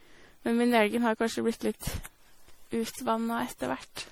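Generation loss throughout: the speech was likely re-encoded as MP3 around seven times, consistent with 64 kbit/s, leaving it swirly, hollow and smeared with blurred attacks.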